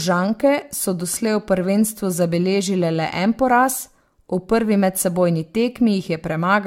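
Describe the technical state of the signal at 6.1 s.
At 6.1 s the speech carries generation loss, present across the whole clip. The likely cause is repeated lossy re-encoding, consistent with around five AAC-LC passes near 96 kbit/s, each requantising on a shifted frame grid. The result is swirly, hollow, smeared speech with blurred attacks and nothing above 17 kHz.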